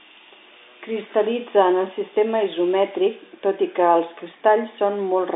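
Nothing here sounds wrong, just ordinary speech carried over a standard G.711 A-law telephone line, with the usual narrow band running roughly from 250 Hz up to about 3.7 kHz.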